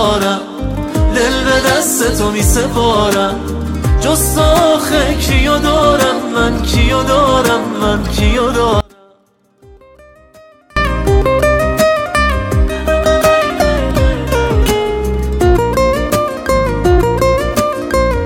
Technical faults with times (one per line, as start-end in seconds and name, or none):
8.80-10.76 audio dropout to a faint residue